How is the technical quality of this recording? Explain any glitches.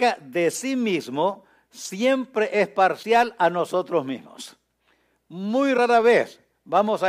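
The recording has three short glitches, all from damaged data in a compressed stream. They fall at 0.51 to 0.56 s, 2.99 to 3.05 s and 5.74 to 5.79 s, each about 50 ms long. At those spots some of the encoded bytes were wrong, so the decoder misread the frames, lost sync and had to hunt for the next valid frame header. You hear each one as a quick chirp, squawk, click or short hole cutting into the speech.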